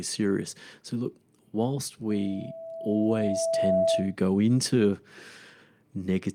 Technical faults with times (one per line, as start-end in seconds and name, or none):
2.09-4.16 loudspeaker feedback squeal